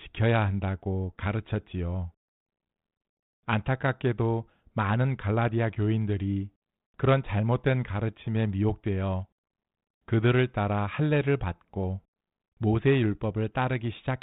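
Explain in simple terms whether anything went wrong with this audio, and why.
Nothing went wrong: the speech has passed through G.726 ADPCM, the coding used on cordless home phones, and it behaves exactly as that telephone system is designed to.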